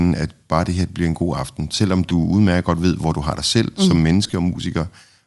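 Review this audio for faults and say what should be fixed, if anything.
There's a grainy, breathy edge on the upper frequencies all through the speech. That's likely Bluetooth LC3 compression: the codec throws away much of the top spectrum and fills it back in with noise. The texture points to a fairly lean setting, around 48 kbps with 7.5 ms frames. Running the link at a higher LC3 bitrate, or capturing the audio on the recording device itself, would avoid it.

There are also two spots of lost LE Audio frames. At 2.09–2.11 s there's a short noisy smear lasting about 15 ms, which fits two 7.5 ms frames going missing. At 4.27–4.33 s it's messier, with 37.5 ms lost in total, scattered across 60 ms, and the longest gap is around 20 ms. In both places the decoder patches the holes by reusing the last spectrum with random signs, so the speech briefly turns into that noisy smear. Keeping the devices closer together, clearing away radio interference and leaving more retransmission headroom on the link would stop those dropouts.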